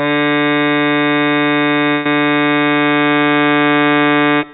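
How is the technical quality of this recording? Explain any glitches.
One glitch stands out in this music, which comes through a call path with nothing above 4 kHz, consistent with G.711 A-law narrowband coding. From 1.91 to 2.06 s the sound freezes into a held, fading smear, then jumps ahead. That is a burst of packet loss. The receiver stretched and faded the last audio to cover the 140 ms gap, so that much music is missing when playback resumes.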